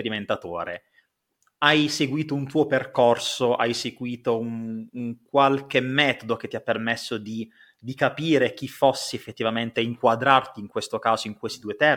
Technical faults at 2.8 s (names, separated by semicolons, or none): none